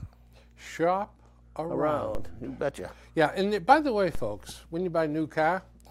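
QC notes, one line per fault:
2.15 s and 4.15 s, DC step: the waveform's zero line jumps by about -23 dBFS and then drains away through a roughly 2 Hz high-pass, giving a single low thump each time. Unlike a dropout, the sound itself carries on unbroken.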